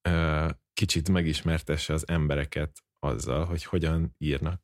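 No technical faults are audible.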